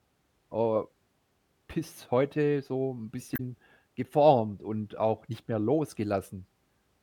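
At 3.34 to 3.40 s, damaged data in a compressed stream corrupts a short stretch of frames, so the decoder misreads them, loses sync and hunts for the next valid frame header. In the speech this comes through as a brief glitch.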